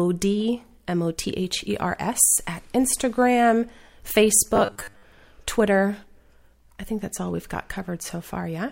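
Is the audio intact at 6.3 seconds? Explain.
Yes, the speech at 6.3 seconds is intact, with no fault audible at that moment.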